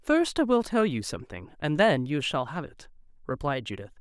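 A short speech recording with nothing technically wrong with it.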